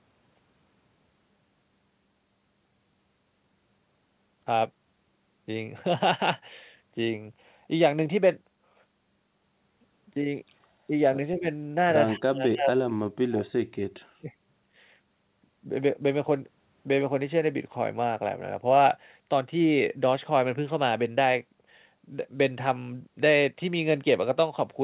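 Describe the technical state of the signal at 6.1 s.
At 6.1 s the speech is intact, with no fault present beyond the call path's ordinary narrowband character, which sounds like G.711 A-law and leaves nothing above 4 kHz.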